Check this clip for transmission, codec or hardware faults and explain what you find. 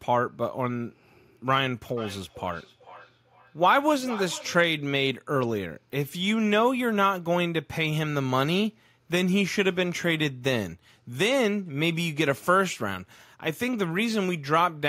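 There is one fault: feedback echo between two devices, from 1.97 to 4.75 s. A second device in the same room replays the call into a microphone whose echo canceller ignores it. The speech returns roughly every 0.4 s, peaking at about 14 dB below the speech, each return thinner and more ringing. The fixed spacing sets it apart from room reverberation.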